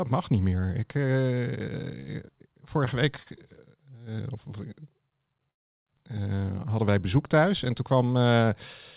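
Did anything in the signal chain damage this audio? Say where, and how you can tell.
Yes. Three short stalls from late packets hold the speech too long with a slight buzz or dip, at 2.00–2.10 s (74 ms stretched), 2.85–2.90 s and 3.23–3.29 s. At the network and jitter-buffer stage, packets arrived late and the receiver stretched the last sound, then resumed with nothing lost.

A call audio freeze at 5.51–5.89 s leaves a brief fading buzz or hiss and then roughly 350 ms of silence before speech resumes from the same point. The likely cause is packets held up in transit that emptied the jitter buffer, inserting a gap. The band ending near 4 kHz fits the narrowband call codec.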